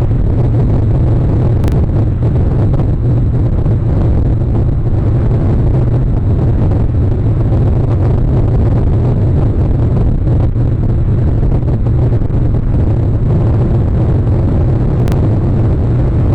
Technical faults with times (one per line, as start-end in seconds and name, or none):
1.64-1.72 chunks out of order
15.00-15.12 chunks out of order